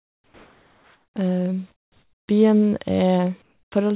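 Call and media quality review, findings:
Comfort noise in place of the background at 0.00–1.16 s, 1.72–2.28 s and 3.42–3.72 s: real room tone drops out for flat, featureless hiss, quieter by about 3, 12 and 10 dB. Likely DTX on the sender, receiver synthesising noise during the gaps.

Onset clipped by the voice detector at 3.70 s: the sound comes back hard, about 20 ms of its soft start missing and covered by that synthetic noise. Sender's VAD probably woke late, so the first bit never got sent.

Everything also tops out at 4 kHz, which fits a narrowband G.711 call path.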